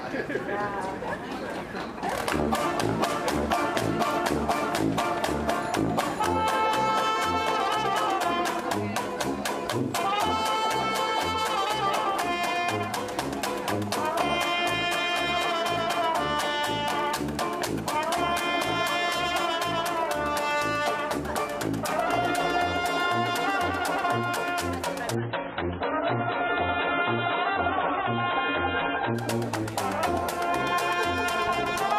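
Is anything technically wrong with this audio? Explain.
Yes. From 25.15 to 29.15 s, an adaptive stream at a lower bitrate: the connection slowed, so playback switched abruptly, without a gap, to a much lower-bitrate version, consistent with a drop from around 128 to 16 kbit/s. Codec artefacts rise and nothing remains above 4 kHz.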